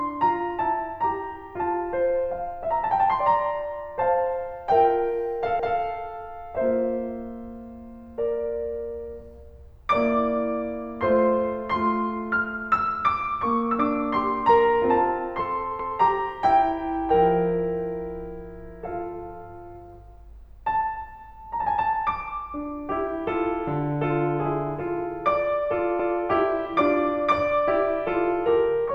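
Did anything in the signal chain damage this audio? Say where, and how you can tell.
Yes, overlapping chunks at the buffering stage: at 5.6, 15.8 and 26.0 s the music repeats 200 ms, so each 10 s chunk restarts before the last finished.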